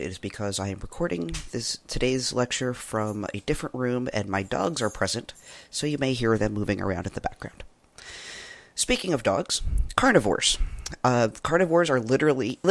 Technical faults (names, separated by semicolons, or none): none